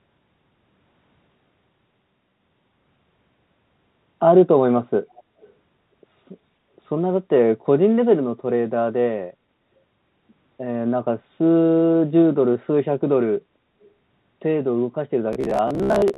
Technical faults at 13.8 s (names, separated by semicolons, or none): echo leak